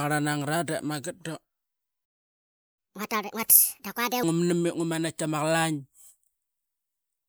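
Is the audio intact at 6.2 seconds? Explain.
Yes, the audio is intact at 6.2 seconds, with no fault at that moment.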